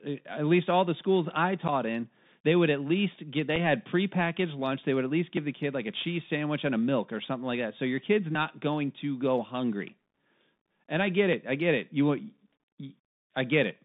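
Throughout, the speech carries the Bluetooth CVSD headset codec, plainly audible: a line band of roughly 150 Hz to 3.7 kHz, granular hiss, and scratchy s sounds where loud, high-frequency energy outruns the one-bit, 64 kbps coder's adapting step. This separates it from a generic telephone band-limit.

At 1.68 to 1.70 s, and again at 3.56 s between "would at least get" and "had prepackaged lunch", there is unconcealed Bluetooth headset packet loss. About 11.2 ms and then 3.8 ms of audio drop out, replaced by silence or an idle pattern, pointing to roughly three packets and then one. The holes have abrupt edges, and the speech returns briefly quieter.

At 5.37 s, between "would at least" and "the kid like a", and at 8.35 s, between "your kid's" and "going to go hungry", audio is missing between chunks, about 20 ms each time. Unlike the packet holes, no silence is left: the two sides butt together as a skip. 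The 3-second spacing likely reflects chunked recording or processing.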